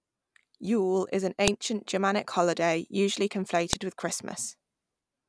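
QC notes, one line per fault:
1.48 s and 3.73 s: file header played as audio. Each is a sharp, loud click or snap lasting only a couple of milliseconds, cutting across the speech regardless of what the signal is doing at that instant. The audio was assembled from separate WAV pieces joined end to end without stripping each piece's header, so a few dozen bytes of file metadata are decoded as sample values and land as an abrupt spike at each join.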